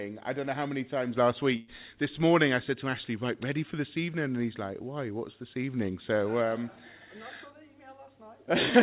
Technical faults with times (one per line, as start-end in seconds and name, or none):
1.56-1.69 burst of packet loss